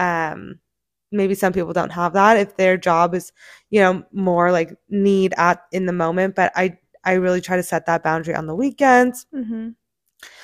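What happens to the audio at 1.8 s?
Nothing goes wrong at 1.8 s; the speech runs on intact through that moment, with no dropout, click or distortion to be heard.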